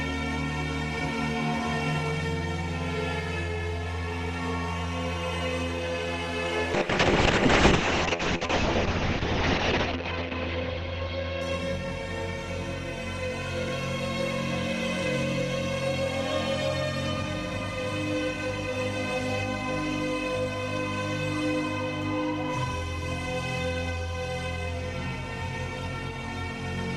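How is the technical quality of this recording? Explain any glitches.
The recording has one clear fault, a call bitrate drop, from 6.79 s to 12.43 s. The call's bandwidth estimate fell, and the encoder had to work with far fewer bits. At 6.79 s the audio turns rough and watery, and the top end goes, with bandwidth narrowing from 20 kHz to about 8 kHz. The worst stretch lasts about 3.1 s. The coarseness points to a rate near 6 kbps, down from roughly 48 kbps. Full quality returns at 12.43 s.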